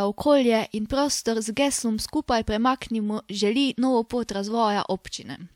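No technical faults can be heard anywhere in the recording. Nothing in the speech points to a transmission, processing or playback problem.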